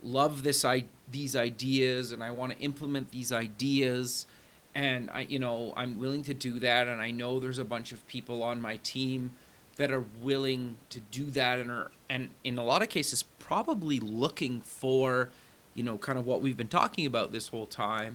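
The speech signal carries no technical faults, with only the room's own background noise sitting about 32 dB beneath the voice as part of the recording.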